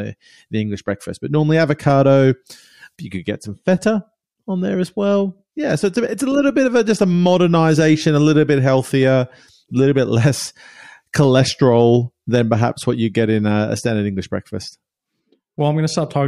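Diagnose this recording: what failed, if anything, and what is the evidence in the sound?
Nothing failed; no audible defect appears anywhere in the speech.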